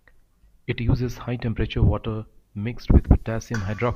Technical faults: none

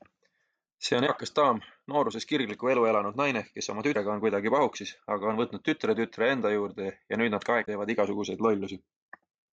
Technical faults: damaged data in a compressed stream

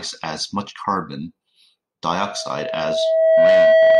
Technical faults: loudspeaker feedback squeal

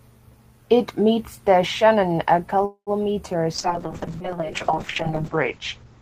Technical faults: call audio freeze; call bitrate drop

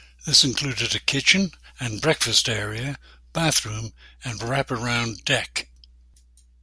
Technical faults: none

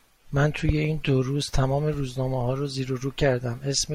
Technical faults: none

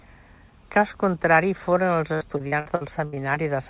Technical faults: repeated packet loss (robotic sound)

